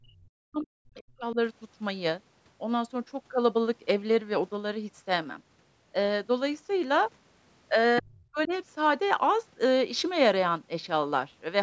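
From 0.0 to 1.37 s the speech dips and breaks into pieces, about a second of it pulled down by up to roughly 40 dB. This is likely speech suppressed in double talk: an echo canceller, unable to separate talker from loudspeaker echo, turned both down. Unlike a network dropout, the gaps are gain dips rather than hard silences.

The same suppression returns from 8.0 to 8.52 s, briefly gutting about 0.4 s of speech. Within it, from 8.4 to 8.48 s, a faint second voice, about 25 dB below the speech, slips through, likely the other side's voice leaking through as uncancelled loudspeaker echo. It differs from room reverb: it is a separate talker, not a smeared tail of the main voice. The call microphone processing, which leaves nothing above 8 kHz, shapes the whole clip.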